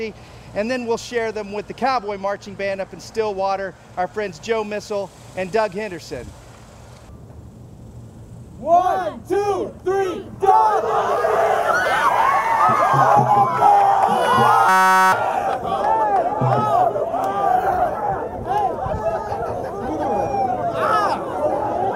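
From 14.69 to 15.13 s there's a system hang loop: a 5.33 ms slice, fitting a 256-sample buffer, repeats as a steady 188 Hz buzz, losing about 0.4 s of audio.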